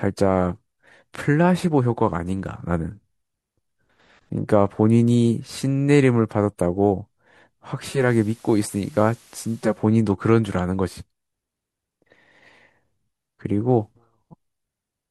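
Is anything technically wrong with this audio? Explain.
Yes. From 7.82 to 9.84 s there is digital radio blending to analogue: a 0.32 s cross-fade to the FM broadcast brings hiss about 30 dB down, with no level jump, unlike a dropout.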